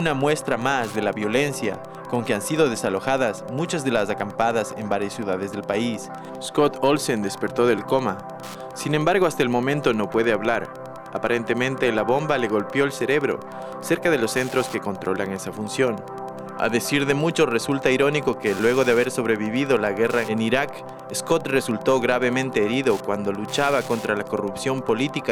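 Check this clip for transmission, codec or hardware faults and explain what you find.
Wi-Fi interference runs through the whole clip. From start to finish there is a steady ticking at just under ten per second, sitting about 25 dB below the main sound. A nearby Wi-Fi radio transmits its beacon every 102.4 ms, and the audio circuit rectifies those radio bursts into small voltage pulses. On a waveform this shows as evenly spaced spikes, and on a spectrogram as thin vertical broadband lines repeating at that interval.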